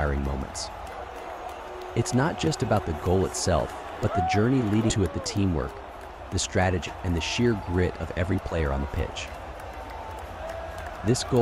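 Compressed frames skipped at 4.89, 6.87 and 8.51 s: runs of missing or rejected 20 ms frames make the audio jump ahead by roughly 200, 150 and 40 ms.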